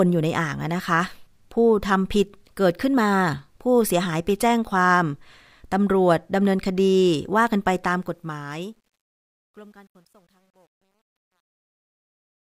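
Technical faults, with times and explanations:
7.84–12.41 s, truncation distortion on a fade: the speech fades out from about 8 s, but the gain stage carrying the fade rounds each sample to a coarse grid with no dither, which fits a 10-bit word length. As the level drops toward the smallest step, the waveform collapses into a few square stairs. From 9.14 s to the end the tail turns gritty instead of thinning smoothly away.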